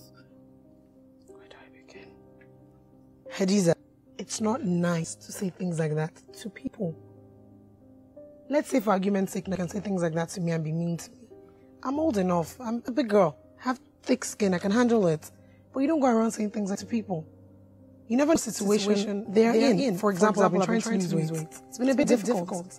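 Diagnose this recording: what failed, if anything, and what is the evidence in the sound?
Compressed frames skipped, at the codec or storage stage: the sound jumps forward at 3.73, 5.04, 6.67, 9.55, 12.88, 16.75, 18.35 and 22.03 s, losing roughly 70 to 200 ms each time. Those amounts fit whole 32 ms frames, two to seven at a time, being missing or rejected by the decoder. It is not a network dropout or a buffer glitch: the audio jumps ahead by the missing frames rather than leaving a gap.

Doubled audio track, most likely from a second, slower capture path or an edit holding two copies out of step: from 18.59 s to the end, a full-band copy about 5 dB quieter trails the original by around 200 ms. It begins abruptly and keeps the same level and spectrum throughout. Room reverb or acoustic echo would decay and take on room colour, and this copy does neither.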